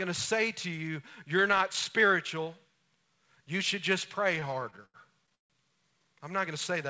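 From 4.36 to 5.52 s the speech drags and stutters through fourteen held moments, the longest 149 ms, 358 ms in all. These repeated stalls (stutter) come from packets arriving late or too slowly: the jitter buffer kept emptying and the receiver extended the last sound, so nothing is missing.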